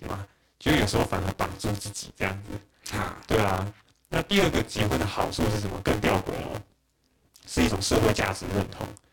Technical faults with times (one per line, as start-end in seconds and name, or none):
0.00-9.13 buffer tearing